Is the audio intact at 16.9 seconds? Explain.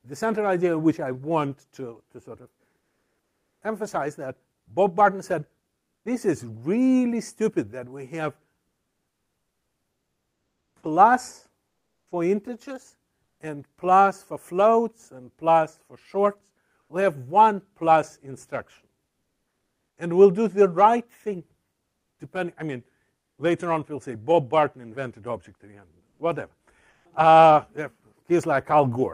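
No. From 16.81 to 16.89 s, likely discontinuous transmission (Opus DTX) paused sending, so comfort noise in place of the background substitutes a flat, featureless hiss, about 1 dB different.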